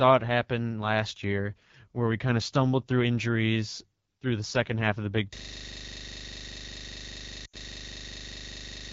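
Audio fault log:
Throughout: AMR wideband (HD Voice) codec. The speech is coded by a pulse-driven model of the vocal tract up to 6.4 kHz. Shaped noise stands in for the band from 6.4 to 7 kHz. The damage is plain. The voice sounds rough and raspy, not clean. That roughness points to one of the lowest AMR-WB rates, which fits about 8.85 kbit/s. At such a rate, too few bits remain to model each pulse and formant well.
5.36 s to the end: system hang loop. The audio locks onto a single 40 ms slice and repeats it without a break, some 90 times. The repeat rate is 25 Hz. At that rate the sound becomes a rapid mechanical stutter, close to a coarse buzz. The machine or its driver froze. The sound hardware went on cycling through the same small buffer, so the slice plays again and again until the clip ends.
7.45 to 7.56 s: lost AMR speech frames. About 80 ms fails, which fits four 20 ms frames. 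This happens inside the looped stretch. For that span the decoder reuses the last good pitch and vocal tract settings and lowers the gain step by step. The sound smears and drops away quickly, as wideband concealment does. It returns weak and rough for a moment, and then the loop resumes.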